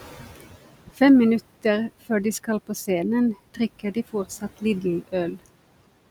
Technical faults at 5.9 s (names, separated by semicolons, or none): noise suppressor artifacts